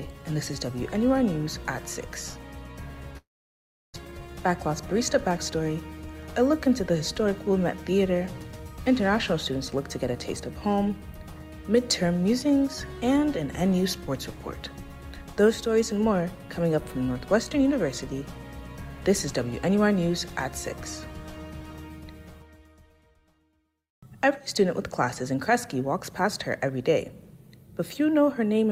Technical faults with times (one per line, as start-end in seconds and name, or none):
3.17-3.98 long network dropout
4.05-5.52 jitter buffer speed-up